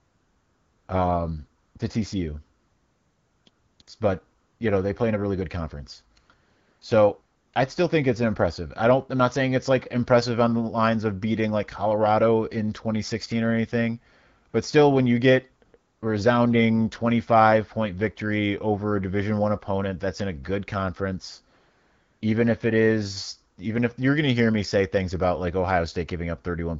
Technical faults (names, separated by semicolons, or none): AMR comfort noise